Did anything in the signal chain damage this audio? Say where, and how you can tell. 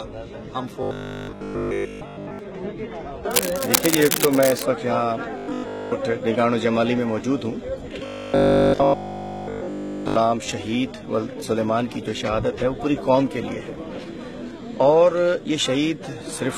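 Yes, in two places. One is a rigid, metallic buzz at 50 Hz from 0.83 to 2.39 s, again from 5.38 to 5.92 s, and from 8.06 to 10.16 s. That's likely robotic sound from repeated short buffers at the driver or buffer stage. Audio wasn't arriving in time, so the same slice got replayed while the real material was dropped. A 50 Hz buzz fits a repeat of about 20 ms. In the first stretch most of the audio is replaced; in the later two, essentially all of it.

Separately, from 3.31 to 4.64 s there's a burst of uneven scratching and rustling sitting about as loud as the sound itself. That points back to the analogue wiring, likely cable scratch noise: a worn cable, connector or control carrying DC got moved, its contact resistance jumped around, and those rapid changes came through as dense, irregular noise for just over a second.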